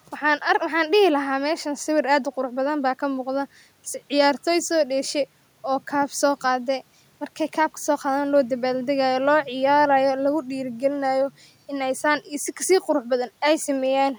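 No technical faults can be heard in the speech; the only background is the room's own noise, sitting about 43 dB below the voice, which belongs to the recording itself rather than the system.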